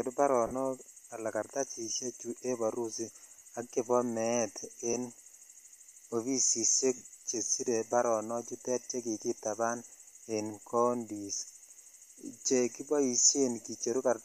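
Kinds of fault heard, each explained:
Lost LE Audio frames: at 0.47 to 0.53 s, 3.37 to 3.45 s, 4.93 s and 6.96 to 7.01 s, the speech briefly turns into a grainy, noisy smear. Each time, the decoder covers missing audio by replaying the last spectrum with scrambled phase. The gaps total about 40, 40, 10 and 50 ms, which fits dropped 10 ms frames of the likely LC3 link. The loss at 3.37 s is scattered across 80 ms in short runs.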